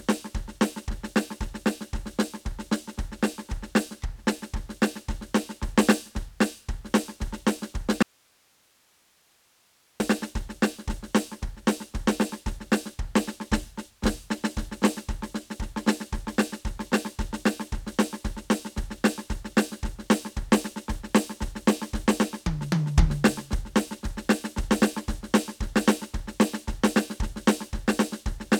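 At 8.03 s the music cuts out, returning at 10.0 s: an audio dropout to a faint residue lasting 1.97 s. Hiss around 40 dB down fills the gap, likely because the signal was lost while the path stayed live. Both edges are instant, unlike a fade.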